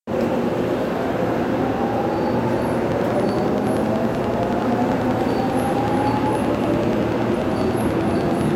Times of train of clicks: 2.92-8.52

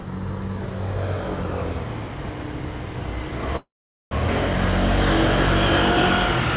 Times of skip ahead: 4.27-4.31

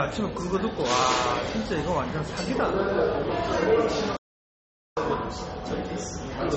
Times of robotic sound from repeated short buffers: none

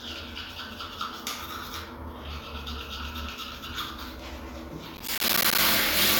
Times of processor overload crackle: 4.95-5.58

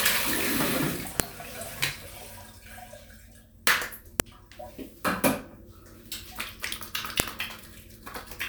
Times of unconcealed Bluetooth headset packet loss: none

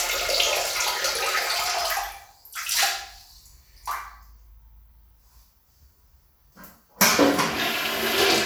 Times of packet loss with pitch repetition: none

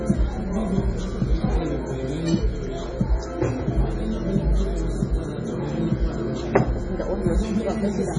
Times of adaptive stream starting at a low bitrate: none

